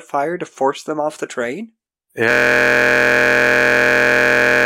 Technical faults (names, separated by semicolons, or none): system hang loop